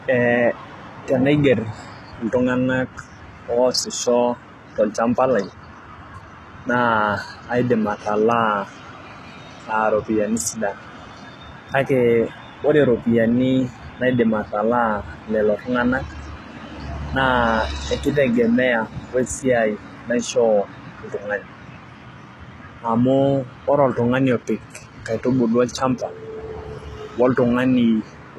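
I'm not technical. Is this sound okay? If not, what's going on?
No. Throughout the speech, the s sounds turn gritty and lispy and nothing is heard above about 12.4 kHz, which points to likely HE-AAC compression. Unlike simple muffling, the treble stays bright but rebuilt.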